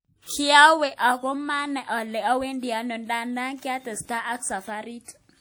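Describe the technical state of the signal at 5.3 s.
At 5.3 s the speech sounds washy and ringing, with a hiss that swells and fades with the voice. This is likely WMA compression, present throughout the clip, where coarse long-block transform coding smears quantisation noise over tens of milliseconds, consistent with roughly 48 kbps.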